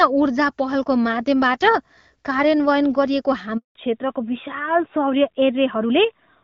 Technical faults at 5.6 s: fallback to narrowband

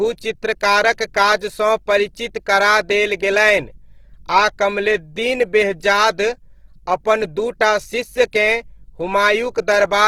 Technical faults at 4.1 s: Opus compression

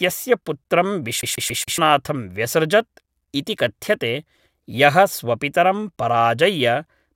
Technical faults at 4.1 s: none

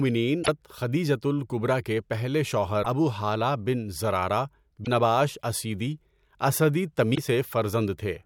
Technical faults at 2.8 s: damaged data in a compressed stream

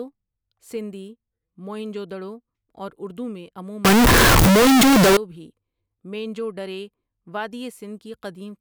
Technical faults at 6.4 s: none

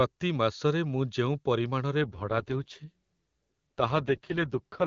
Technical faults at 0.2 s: none

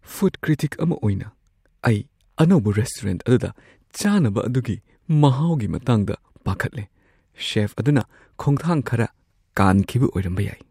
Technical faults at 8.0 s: block of digital silence

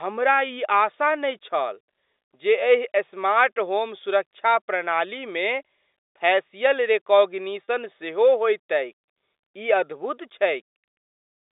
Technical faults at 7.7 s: packet loss with pitch repetition

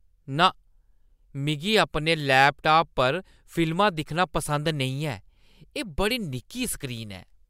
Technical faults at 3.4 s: none

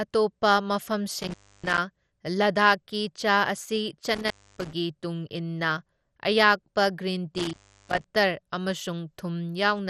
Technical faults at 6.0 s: MP2 compression

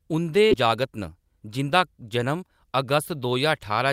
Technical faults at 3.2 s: jitter buffer speed-up

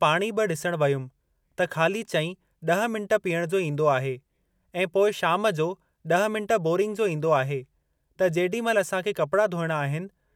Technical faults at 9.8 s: none

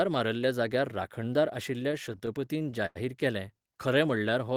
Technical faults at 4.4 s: jitter buffer slow-down

